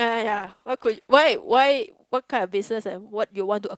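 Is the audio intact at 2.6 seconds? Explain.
Yes, the speech at 2.6 seconds is intact, with no dropout, glitch or other fault at that moment.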